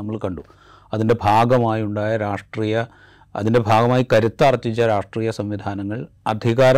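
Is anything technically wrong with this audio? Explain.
Yes. The speech has hard clipping. Peaks exceed what a stage can pass and are cut flat. Brief crackles come at 0.24 s, 2.34 s and 2.78 to 2.81 s, with overdrive of about 0 to 1 dB. Harsh fuzz covers 0.94 to 1.71 s, 3.47 to 4.99 s, and 6.29 s to the end, overdriven by about 10 to 11 dB.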